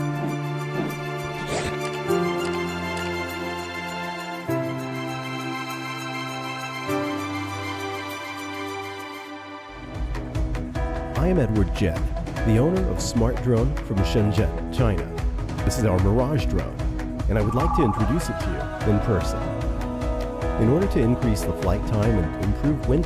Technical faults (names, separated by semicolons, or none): none